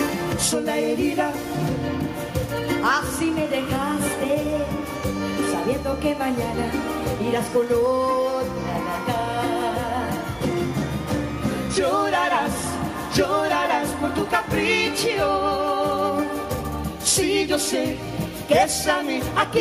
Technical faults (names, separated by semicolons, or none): none